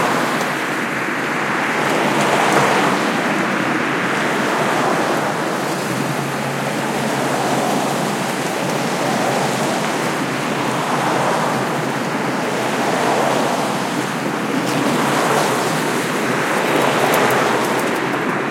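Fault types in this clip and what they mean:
No technical faults detected.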